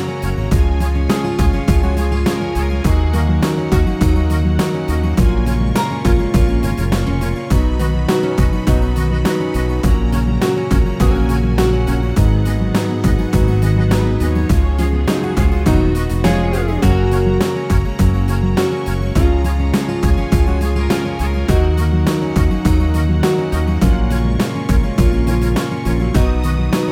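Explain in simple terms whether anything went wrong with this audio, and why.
Nothing went wrong here; no technical faults turn up anywhere in the recording.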